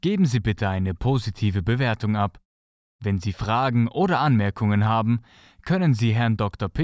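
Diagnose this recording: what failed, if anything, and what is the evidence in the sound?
Nothing failed in this recording; no stage of the chain shows a fault. The speech comes through without any audible disturbance at any point.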